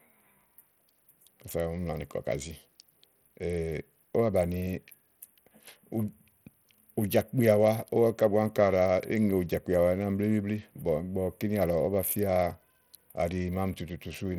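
Speech runs the whole clip with plainly audible codec damage throughout, most likely from Bluetooth SBC compression at a starved setting, which fits a bitrate near 80 kbps. With so few bits, the upper sub-bands are coarsely quantised or dropped, so sibilance flickers and a gritty, aliased haze rides on the sound. On a spectrogram, the treble would look patchy and blocky in time, with nothing above 18.7 kHz.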